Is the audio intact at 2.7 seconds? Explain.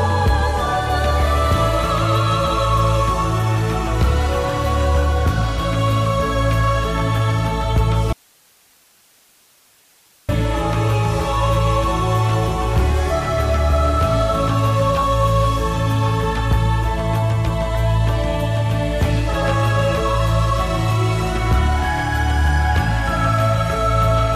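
Yes, the audio at 2.7 seconds is intact, with no dropout, click, distortion or other fault at that moment.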